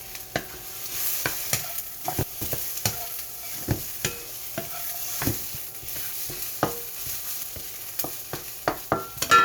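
Chunks out of order occur three times. Blocks of about 0.19 s arrived late and played after the blocks meant to follow them. At 2.04 to 2.42 s and 7.06 to 7.43 s, one block trails by one position. At 5.57 to 6.13 s, one lands two positions late. Nothing is missing, but each span is reshuffled, with hard joins at the boundaries and a brief jumbled moment.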